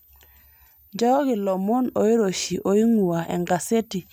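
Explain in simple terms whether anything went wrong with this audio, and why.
A faint, very high whistle sits underneath the speech for the whole recording, wandering in pitch between about 13.2 kHz and 14.8 kHz. This is a switching supply whistle. Many power adapters and chargers work by switching current on and off very quickly. When that switching slows into a range our ears can catch, or beats against another supply nearby, it leaks into the audio as a thin, shifting tone like this one.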